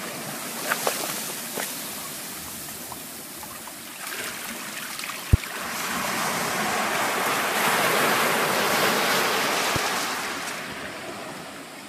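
Two loud pops, at 5.33–5.36 s and 9.76–9.79 s, likely from an electrical voltage spike, jump about 20 dB above the sound, showing as tall waveform spikes and full-height vertical spectrogram lines.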